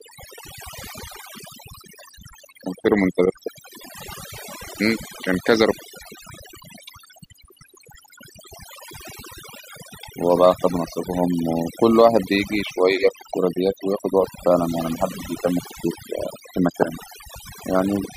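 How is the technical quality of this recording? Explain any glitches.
The recording suffers from overdone noise removal for its full length. Noise reduction set too aggressively mutes individual frequency bands sitting near its noise estimate, taking quiet speech detail with them. The pauses collapse to near silence dotted with twinkling specks.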